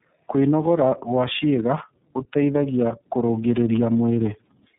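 From start to finish the speech carries tandem speech coding: it's been squeezed through one low-rate speech codec, decoded, then coded again by a second, which sounds like a G.729A-to-iLBC chain with a plain G.711 hop between them. The second coder is working on the first one's artefacts, so you get that compounded roughness and a warbly, swimmy texture. It's muffled too, with nothing above 3.8 kHz.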